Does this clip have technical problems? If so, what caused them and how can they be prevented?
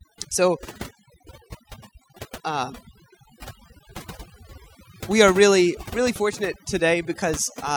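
Yes. Throughout the speech, the background drops to an unnatural near-silence dotted with twinkling specks. This is overdone noise removal: a noise reducer set too aggressively cut individual frequency bands deep whenever they sat close to its noise estimate, taking the quieter parts of the voice along with the noise. To prevent it, apply gentler reduction and check by ear for swirling artefacts before committing.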